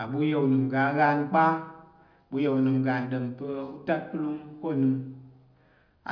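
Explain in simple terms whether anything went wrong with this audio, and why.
Nothing went wrong with this speech recording that a listener can pick out. At no point does the sound change in a way that points to a technical problem.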